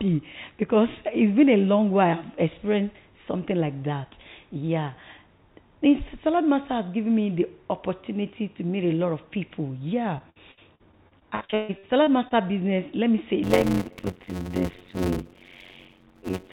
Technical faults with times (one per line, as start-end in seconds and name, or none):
10.18-12.32 repeated packet loss (robotic sound)
13.43-16.53 block size mismatch (padded)